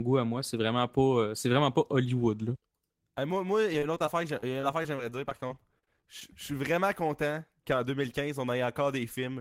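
From 3.73 to 6.22 s there's repeated packet loss: a couple dozen short dropouts, none longer than 38 ms, each patched over, giving choppy, robotic-sounding speech.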